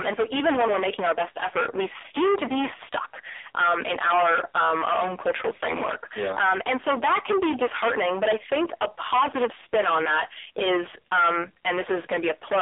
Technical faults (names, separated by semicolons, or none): hard clipping; AMR narrowband mobile codec